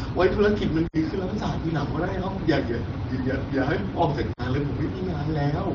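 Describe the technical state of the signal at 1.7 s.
At 1.7 s the audio is intact, with no fault, and the AMR wideband (HD Voice) coding it passes through is working as intended.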